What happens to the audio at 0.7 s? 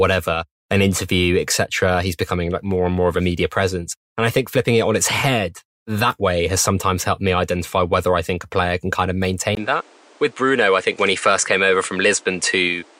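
Nothing goes wrong at 0.7 s; the speech there plays through intact, with no dropout, click, distortion or other fault.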